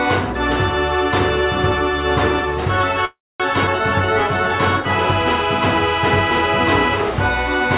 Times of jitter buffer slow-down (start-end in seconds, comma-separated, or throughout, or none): 3.90-4.56